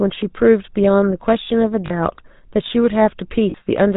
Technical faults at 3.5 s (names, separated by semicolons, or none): GSM full-rate codec; lost GSM frames